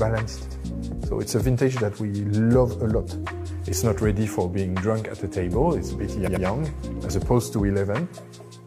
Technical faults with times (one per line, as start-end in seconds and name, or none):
0.47-0.56 repeated frames
6.23-6.41 repeated frames